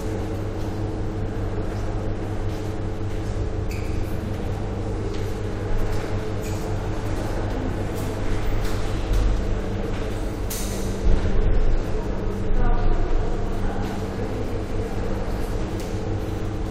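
No technical faults turn up anywhere in this recording of sounds. There is nothing in the audio to point to as a problem.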